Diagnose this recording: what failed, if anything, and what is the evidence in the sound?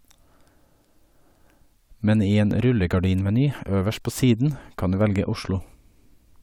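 Nothing in the chain seems to have failed here: the speech recording holds up all the way, with no audible trouble at any stage to diagnose.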